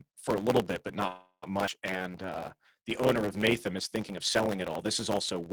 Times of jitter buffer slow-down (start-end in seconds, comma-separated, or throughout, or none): 1.98-3.72